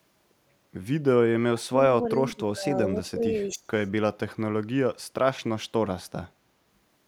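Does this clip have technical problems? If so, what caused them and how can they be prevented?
Yes. From 1.49 to 3.89 s the speech repeatedly dips and breaks up, falling by roughly 30 dB at its deepest, with about two seconds affected in total. This is likely speech suppressed in double talk: with both sides talking at once, the echo canceller could not tell this talker from loudspeaker echo and turned everything down. Using a headset on this end, or a canceller with better double-talk detection, prevents this.

At 3.48 to 3.53 s a brief, faint scrap of delayed voice appears, lagging about 340 ms and sitting around 30 dB below the speech. This is likely echo leak: a loudspeaker's output reached its microphone, and the echo canceller there left a remnant that was sent back. Lowering speaker volume, using headphones, or improving that device's echo cancellation stops it.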